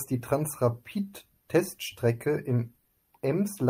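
At 2.79 s, a burst of packet loss interrupts the speech until 2.87 s. Several packets in a row never arrived in time to be played. The receiver filled about 60 ms by extending the last sound and letting it fade, which comes across as a brief held buzz or a fading hiss. The speech then picks up further along. About 60 ms of it is simply gone, so the sound jumps forward slightly.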